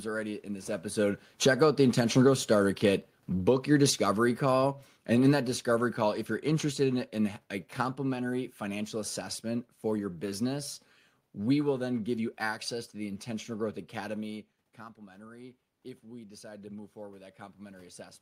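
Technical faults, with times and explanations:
0.9 to 7.44 s, automatic gain falling: just after "already in this", the gain control pulls its gain down steadily by about 12 dB over six and a half seconds. Because the control acts on the whole signal, the voice and the room noise beneath it sink together rather than the voice alone fading. The level has settled by "a complimentary financial assessment".
14.97 to 18.22 s, automatic gain rising: around 14 s the talker moves back and the input drops by about 16 dB. The gain control treats this as too quiet and raises its gain gradually through to the end of the clip. The voice swells slowly over several seconds, and the room noise swells with it. That shared rise in the background shows that the change comes from the gain stage and not from the talker.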